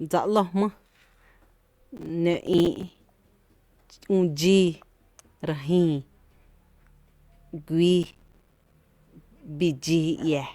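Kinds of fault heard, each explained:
Processor overload crackle: The processor could not finish each short audio buffer in time, so many were missed in a row. Each miss drops to silence with hard edges, which fits buffers of around 5 ms. Dozens of these gaps make gritty crackle from 1.97 to 2.98 s and from 8.03 to 8.74 s.
Corrupt frame decoded: Damaged bits in a compressed frame were decoded anyway. The decoder put energy at the wrong frequencies for about one frame. It is heard as a brief chirp or blip of noise at 9.68 s.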